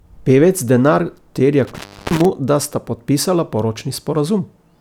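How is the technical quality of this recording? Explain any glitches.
The recording has one clear glitch. From 1.64 to 2.25 s, an intermittent contact, a loose connection, briefly opens, cutting the speech for about 0.33 s with crackle at both edges; the waveform shows near-silence bracketed by spiky clicks.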